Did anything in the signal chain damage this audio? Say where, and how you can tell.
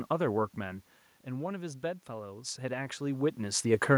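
Yes. Automatic gain rising runs from 0.56 s to 3.66 s, in the call-processing stage. Just before it, around half a second in, the talker moves away and the level at the microphone drops by about 10 dB. The AGC responds by slowly raising its gain by about 4 dB over three seconds. The room noise swells along with the voice, which shows the change comes from amplification after the microphone and not from the talker.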